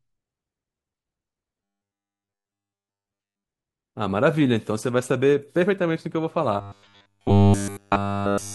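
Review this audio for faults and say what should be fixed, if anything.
The speech turns into a robotic sound from repeated short buffers twice, from 1.62 to 3.44 s and again from 6.57 s to the end at 8.55 s. Both stretches carry a flat, metallic buzz at 100 Hz, which fits a 10 ms chunk being looped over and over. It's likely that fresh audio stopped arriving in time, so the playback looped its last block for essentially the whole span. Keeping the input stream fed, with a bit more buffering headroom, should prevent it.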